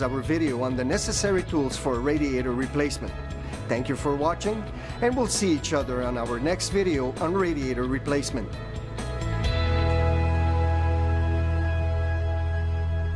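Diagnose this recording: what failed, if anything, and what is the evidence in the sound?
Nothing here gives me anything to diagnose; I listened for trouble at every stage and the sound just carries on without anything going wrong.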